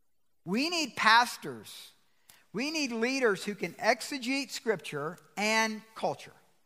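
No technical faults can be heard anywhere in this speech recording.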